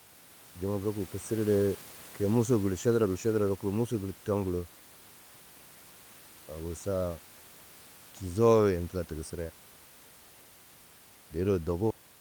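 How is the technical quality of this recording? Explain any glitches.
No technical faults are audible.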